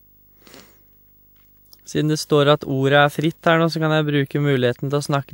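From start to finish, a steady low buzz at 50 Hz sits under the speech, carrying a grainy hash above it and a very high whine at 15.6 kHz. The level stays well below the speech, around 35 dB down. This is video or display buzz: a screen or video cable leaking into the audio path. The buzz tracks the picture's 50 Hz field rate, while the high tone comes from the line scanning rate.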